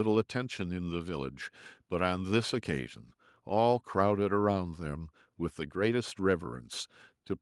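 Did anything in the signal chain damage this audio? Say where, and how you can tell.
No, nothing in the signal chain has damaged this speech recording. At no point can any stage of the chain be heard altering the sound.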